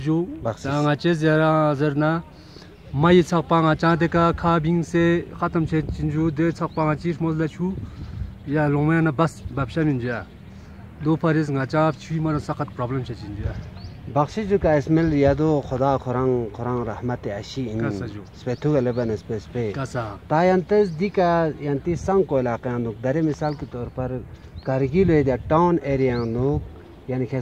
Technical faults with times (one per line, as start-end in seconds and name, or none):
17.28 dropped samples